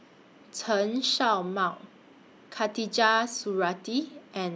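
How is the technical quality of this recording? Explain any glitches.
No glitches or technical faults can be heard here.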